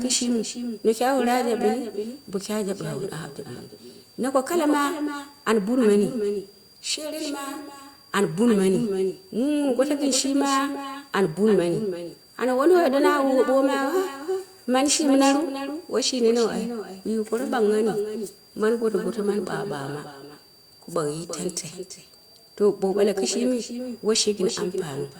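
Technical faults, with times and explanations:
Throughout, switching supply whistle: a thin, high whistle sits about 30 dB below the speech, wandering between roughly 4.6 and 4.8 kHz. It points to a switching power supply running in audible burst mode, its frequency shifting as the load changes.
Throughout, echo with no canceller: every phrase is followed about a third of a second later by a thinner copy roughly 8 dB down. The far end's loudspeaker is feeding its microphone, and nothing removes the returned signal before it travels back.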